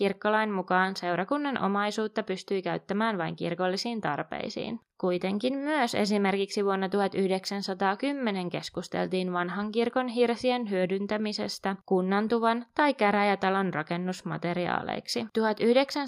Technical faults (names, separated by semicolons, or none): none